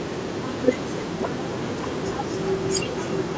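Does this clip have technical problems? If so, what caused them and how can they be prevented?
Yes: echo with no canceller runs throughout. The far end's loudspeaker feeds its microphone, returning the speech roughly 300 ms later at about 15 dB quieter, which appears as faint delayed repeats of each spectrogram band. Enabling acoustic echo cancellation or using headphones at the far end prevents it.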